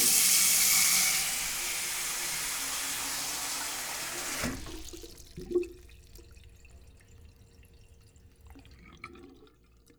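Nothing stood out as a technical fault on listening to this recording of everyday sounds.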